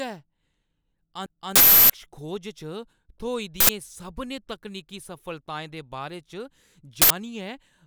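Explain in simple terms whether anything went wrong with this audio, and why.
Two faults are audible in this speech recording.

At 1.26 s there is a CD skip. The player briefly lost its place on the disc, probably from a knock or a flaw. The sound mutes for a few milliseconds with a small tick, then resumes from a different point.

Three times, the playback system sent out an uninitialised buffer. That is a block of memory played before any sound was written into it, so leftover data comes out as a loud burst of digital noise. This happens from 1.56 to 1.90 s, about 0.34 s long, which fits a 16384-sample block. It happens again from 3.60 to 3.69 s, just before "सभनें तकनीकी सफलताएं दे", and from 7.02 to 7.10 s. Those two are each about 0.085 s long, which fits a 4096-sample block.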